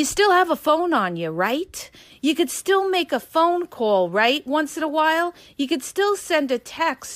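No technical faults are present.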